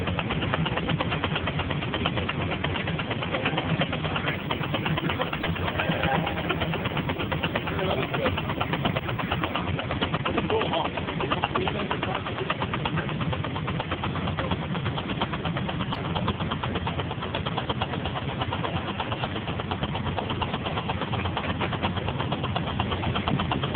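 From 4.28 to 9.56 s a video or display buzz sits low under the sound, around 30 dB down: a screen or video cable coupling in, giving a 50 Hz field-rate buzz with hash and a thin 15.6 kHz line tone. A spectrogram shows stacked harmonics plus a steady high line.

At 5.42 to 5.46 s, inside that buzz, a corrupt frame decoded produces a loud glitch. Flipped bits in a couple of compressed frames made the decoder misplace energy. It appears as a brief, sharp-edged spectral smear. A second, quieter glitch follows at 15.93 to 15.98 s.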